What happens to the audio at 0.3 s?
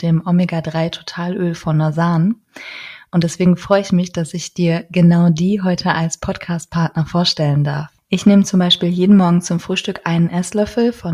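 Nothing goes wrong at 0.3 s: the audio plays through that moment intact, with no dropout, click or distortion.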